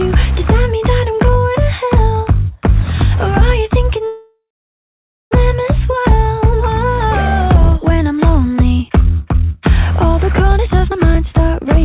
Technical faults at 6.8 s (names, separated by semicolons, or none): none